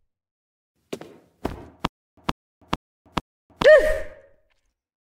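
From 1.87 s to 3.64 s the audio falls into a stutter with silent gaps: a 142 ms burst repeats four times, each followed by about 300 ms of dead silence, giving a steady 442 ms cycle. The likely cause is a stalled player or stream replaying its last buffered fragment on each retry and then running dry. On a waveform this shows as identical blocks separated by flat silent stretches, and a spectrogram shows matching vertical slices with blank columns between.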